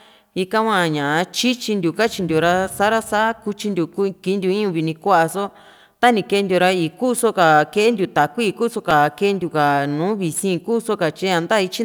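A speech clip with one repeated buffer fault at 8.91 s: a tiny slice of about 3 ms, which fits a 128-sample buffer, plays three times in a row because fresh audio arrived late. Since the slice is so short, it comes across as a brief click or buzz rather than a stutter, and a few milliseconds of speech are lost. The waveform shows an identical short segment tiled three times with hard joins, and the spectrogram shows a thin vertical broadband streak.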